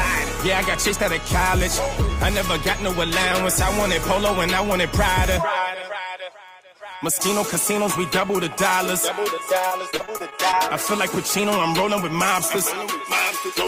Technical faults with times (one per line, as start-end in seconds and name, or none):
9.67-10.54 repeated packet loss (robotic sound)